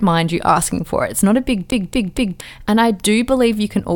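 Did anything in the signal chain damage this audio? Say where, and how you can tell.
Yes: right after "not a big", 1.70 to 2.41 s, a 0.23 s chunk of speech repeats three times with a short mute at each jump, a CD stuck on one turn during playback.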